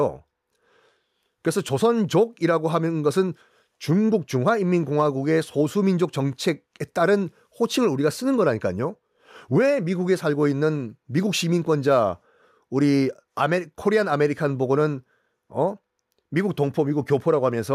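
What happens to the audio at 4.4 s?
Nothing goes wrong at 4.4 s: the speech runs through that moment intact, with no dropout, click, distortion or other fault.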